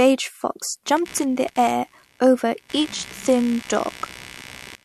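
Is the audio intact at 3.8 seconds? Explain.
No. At 3.8 seconds the speech carries computer activity noise, which runs from about 0.97 s to the end of the clip. Changing load in the processor, graphics card or mouse shifts the ground the audio circuit shares, injecting a buzzy, chirping pulse train at around 70 pulses per second, roughly 20 dB below the speech. Unlike steady mains hum, this buzz follows the computer's activity rather than a fixed supply frequency.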